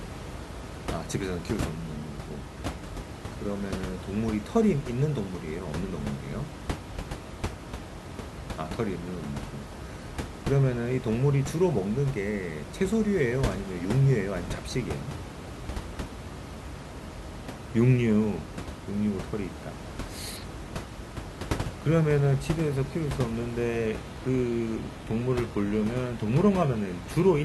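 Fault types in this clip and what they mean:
Adaptive stream at a lower bitrate: from 23.87 s to the end of the clip the stream drops to a lower-quality version without any gap, so the speech quality changes abruptly. Above that point nothing remains over 14.9 kHz and codec artefacts become more audible, which fits a switch from a higher-rate AAC stream to a low-rate HE-AAC one. The room noise, about 10 dB below the speech, continues through the change.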